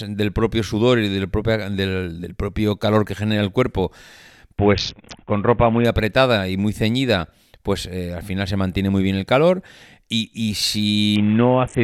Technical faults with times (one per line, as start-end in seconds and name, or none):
4.58-5.85 Bluetooth SBC bit pool drop
11.16-11.84 Bluetooth SBC bit pool drop